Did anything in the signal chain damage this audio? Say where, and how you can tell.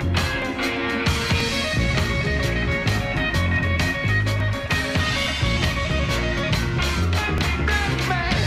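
Yes, there's an overlap between stream segments at the network and playback stage. You get tiny skips at 0.42, 1.40, 2.39, 4.40 and 7.38 s, where 6 to 15 ms of sound drops out and the waveform jumps. They land on roughly one-second boundaries. Overlapping time stamps made the player trim audio that was never actually duplicated.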